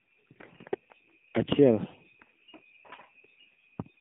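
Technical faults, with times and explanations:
Throughout: AMR narrowband mobile codec. The sound is confined to roughly 150 Hz to 3.5 kHz, with plainly buzzy, synthetic speech that fits a low mode near 7.4 kbps.
0.32–0.51 s: AMR bit errors. Flipped, weakly protected bits misplace excitation pulses and skew gain and spectrum, so the speech turns briefly hoarse and gargly, consistent with about nine damaged frames.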